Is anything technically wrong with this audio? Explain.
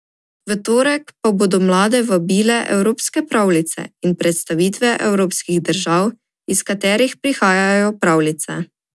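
No, no technical faults here.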